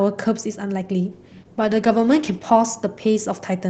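Speech over an Opus call path, with content up to about 8 kHz, hits a call bitrate drop from 1.12 s to the end. The coding turns rough and watery, which fits the rate falling from about 32 to 10 kbps and bottoming out for roughly 1.2 s. On a spectrogram the upper band thins and smears, and the high frequencies vanish.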